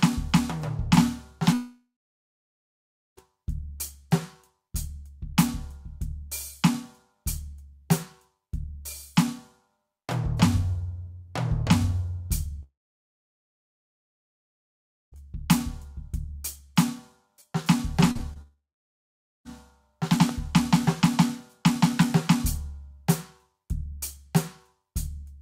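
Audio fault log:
1.53–3.19 s, 12.63–15.18 s and 18.41–19.47 s: long network dropout. The music stops for about 1.6 s, 2.5 s and 1.0 s. Each gap opens with a brief fading continuation of the last sound, then falls to silence for roughly 1.3 s, 2.4 s and 0.9 s. This is likely a stalled stream that the receiver could only extend for a moment before giving up. Playback resumes later in the music, and the missing passage never returns.
18.11–18.21 s and 18.33–18.37 s: short concealed packet loss. Two back-to-back holes of about 40 ms and 20 ms, then another of 20 ms, produce a quick smear and wobble just before the third dropout. The decoder filled each missing packet by extending the preceding waveform and then crossfaded back into the real signal, so the music blurs briefly rather than cutting out.
20.29 s: loud pop. A single sharp click, about 5 dB above the music, lands on top while the music continues underneath without a break. 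A sudden voltage step or pulse is likely, such as from a switch, static discharge or driver glitch. The following circuitry shapes that step into a short, hard transient, which is why it sounds like a pop and not a gap in the music.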